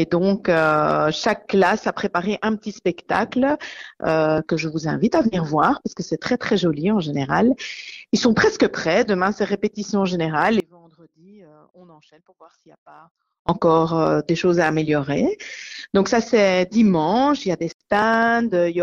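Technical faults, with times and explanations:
10.6–13.49 s, audio dropout to a faint residue: the sound cuts out abruptly for 2.9 s, leaving a faint trace about 30 dB down, likely because the signal feed was lost while the path stayed live. Unlike a pause or fade, both edges are sudden.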